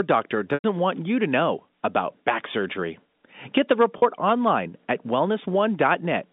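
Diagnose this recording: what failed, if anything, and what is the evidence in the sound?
Packets were lost on the network, and the receiver filled each gap by repeating the last pitch period. At 0.54 to 0.64 s, 100 ms is missing and a held, buzzy tone fades toward silence. At 3.98 to 4.02 s, just before "online at", a 40 ms gap sounds briefly held.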